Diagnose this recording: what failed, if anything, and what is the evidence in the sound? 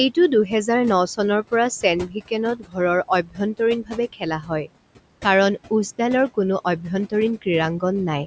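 The failure sits in call processing, where the noise suppressor leaves audible artifacts across the whole clip. The room noise, about 18 dB below the speech, is pushed down by about 18 dB more in the gaps and then returns under each phrase. A level pumping in time with the speech points to a spectral suppressor rather than a simple gate or compressor.

Speech cut by the noise suppressor also occurs at 2.07–2.30 s, 2.56–2.77 s, 3.08–3.40 s, 3.83–4.23 s and 4.41–4.70 s. In each span, soft speech is pulled down with the background by about 11 to 17 dB, for roughly a tenth to a fifth of a second. The suppressor is mistaking low-level speech for noise. Unlike a network dropout, nothing vanishes abruptly and there is no gap or repeat, only faint, swallowed parts inside otherwise continuous speech. Above 8 kHz the band is empty, as the call path's bandwidth sets it.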